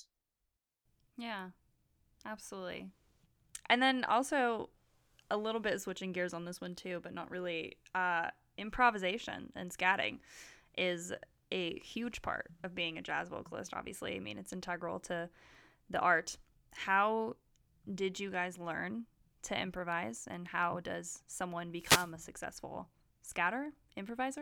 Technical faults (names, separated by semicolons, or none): wireless microphone noise hit